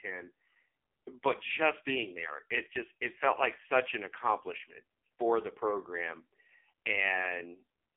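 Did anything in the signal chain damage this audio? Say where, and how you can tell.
Yes, at the codec stage: AMR narrowband mobile codec damage throughout, with nothing above 3.5 kHz and heavy buzzy, synthetic smearing that fits a low bitrate around 5.9 kbps.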